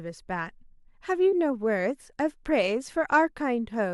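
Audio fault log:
None found; the speech recording shows no audible faults.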